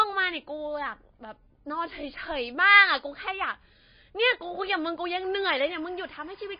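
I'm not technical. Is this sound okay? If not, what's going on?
No. Two things are wrong with this speech clip.

All the way through, the voice sounds dull and clearly watery, with nothing above about 5 kHz, and the s sounds swirl and chirp. This is MP3 compression, likely from saving the file at a low quality setting. Unlike a recording that is simply muffled, the damage moves: faint details flicker in and out from moment to moment, and the starts of sounds are smeared.

From 5.23 s to the end, a quiet chirping warble sits behind the voice. This is timecode bleed, a timing signal from a neighbouring cable or track leaking into the audio. It isn't a steady whistle or hum. It keeps flipping between two pitches around 1 kHz and 2 kHz, in a rhythm that repeats 25 times a second.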